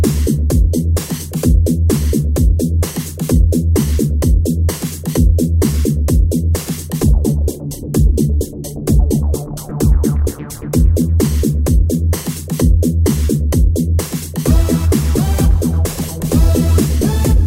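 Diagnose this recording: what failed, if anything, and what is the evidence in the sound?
The failure is in the codec stage of a Bluetooth LE Audio link: lost LE Audio frames at 9.70 s. For about 15 ms, which fits two 7.5 ms LC3 frames going missing, the decoder has no data and rebuilds the gap from the last good spectrum with randomised signs. Tonal content turns briefly into a noisy smear. That smear, not a hard silent gap or a sharp click, distinguishes this concealment from a buffer underrun or a dropped-sample discontinuity.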